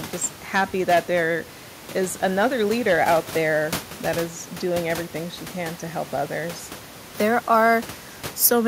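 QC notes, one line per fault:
No faults heard anywhere in this speech clip.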